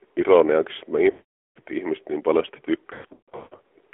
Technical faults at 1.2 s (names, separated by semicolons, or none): AMR narrowband mobile codec; lost AMR speech frames